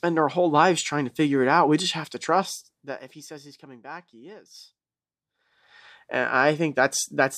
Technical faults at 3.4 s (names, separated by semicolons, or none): zipper noise